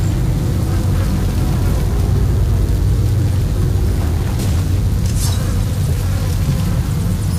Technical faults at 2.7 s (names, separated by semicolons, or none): DECT cordless phone buzz